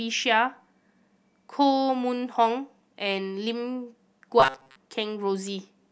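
Robotic sound from repeated short buffers, 4.40 to 4.76 s: the speech becomes a rigid metallic 133 Hz buzz, likely from a 7.5 ms buffer repeatedly replacing most incoming audio.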